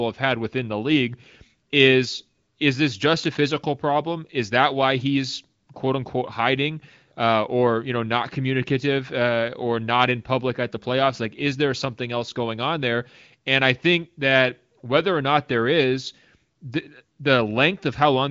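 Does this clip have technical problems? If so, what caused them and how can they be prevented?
No, there are no technical problems to fix here.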